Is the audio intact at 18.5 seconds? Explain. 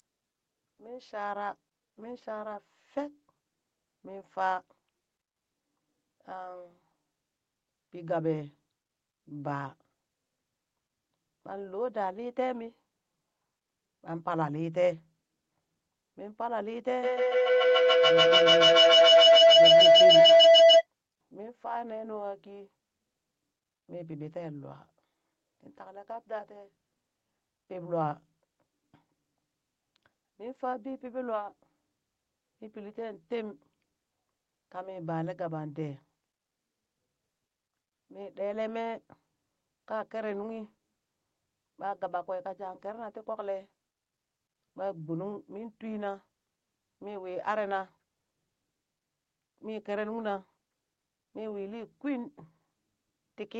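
No. At 18.5 seconds you're in the middle of a feedback howl running from 17.03 to 20.88 s. It sounds like two devices in the same room on the call, so the mic-to-speaker loop gains level each trip. It narrows to a tone around 700 Hz, with the loop repeating roughly every 150 ms, and peaks about 15 dB above the speech.

There's also a DC offset across the whole clip, including this moment. The waveform sits shifted off zero by a constant amount. You won't hear it directly, but it eats headroom and leaves steady energy at the very bottom of the spectrum.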